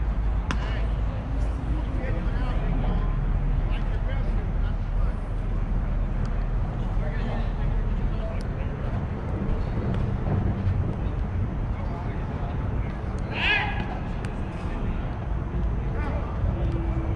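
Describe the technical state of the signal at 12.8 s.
At 12.8 s the signal is intact, with no dropout, clipping, glitch or other fault at that point.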